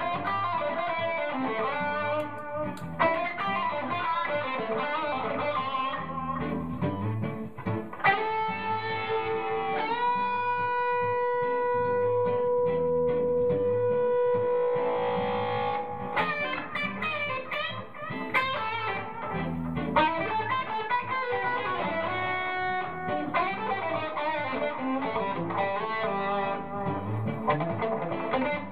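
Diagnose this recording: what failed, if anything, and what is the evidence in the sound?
Nothing failed; no faults heard.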